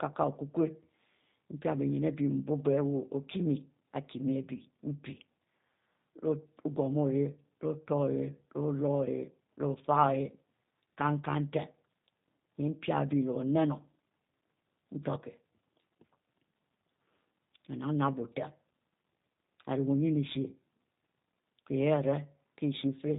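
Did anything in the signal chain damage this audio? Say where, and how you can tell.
Yes: throughout, the speech sounds rough and synthetic with nothing above 3.8 kHz, pointing to the codec stage. G.729 codec damage, which fits 8 kbit/s pulse-based frame rebuilding.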